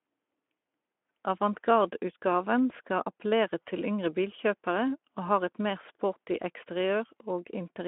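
Speech, with no technical faults to report.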